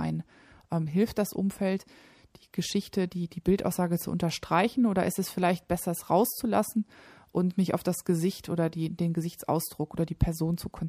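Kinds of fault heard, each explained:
Bit error spike: at 4.29 s and 10.54 s, a flipped bit in one or two samples makes a brief power-of-two jump, heard as sharp broadband ticks near -26 and -32 dBFS.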